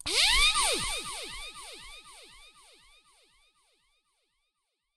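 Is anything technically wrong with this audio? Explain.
No, nothing technically wrong stood out on listening to this audio.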